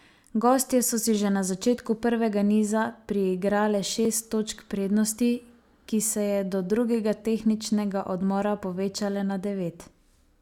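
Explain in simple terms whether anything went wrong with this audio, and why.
A block of digital silence at 4.05 s: for about 1.3 ms the speech drops abruptly to silence and back with no fade, leaving a tiny click or tick.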